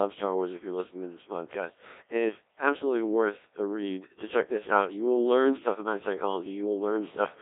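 Throughout, the speech carries heavy Codec 2 vocoder damage. The waveform is not kept. The decoder rebuilds it from sine waves, using pitch, voicing and spectral shape. It sounds robotic and buzzy, which fits about 1.3 kbit/s. Nothing lies above 3.8 kHz.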